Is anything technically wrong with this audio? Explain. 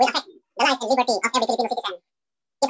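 Yes. Throughout, a wrong sample rate doubles playback without conversion, which fits 8 kHz audio played at 16 kHz, so everything runs twice as fast and an octave high.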